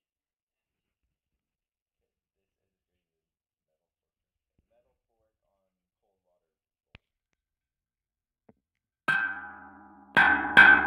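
From 7.61 s to the end, a time-stretched section: software likely lengthened this part to fit a duration, running it at about 0.61 times normal speed by repeating short pieces. The pace drops abruptly while pitch holds, leaving the sound dragging.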